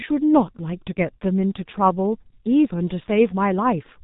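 From start to finish the speech carries heavy damage from the G.723.1 codec. Everything above 3.8 kHz is gone, so a spectrogram shows a hard ceiling with empty space over it and smeared, blocky harmonics below, changing in coarse 30 ms steps. The slow-updating vocal model and very low data rate, which fits about 6.3 kbit/s, leave the voice muffled and hoarse, with sibilants and plosives blurred into soft, indistinct bursts.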